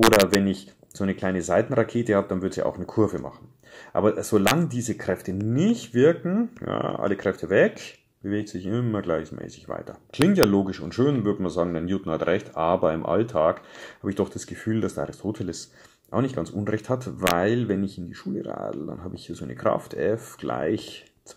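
Integer overflow cracks at 0.03–0.35 s, 4.47–4.51 s, 10.22–10.43 s and 17.27–17.31 s: peaks pushed about 1 to 2 dB past the integer limit wrap to the opposite sign, producing violent cracks harsher than clipping.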